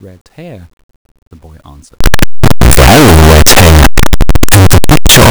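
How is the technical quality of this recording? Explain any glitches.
The first two seconds are clean enough, but from 2.01 s to the end the speech collapses into loud, harsh distortion. It sounds like a signed and unsigned mix-up, most likely in how the 8-bit samples are read. With the top bit flipped, every zero crossing turns into a full-range jump, so the waveform gets shredded and even the soft sounds come out as loud as the strong ones.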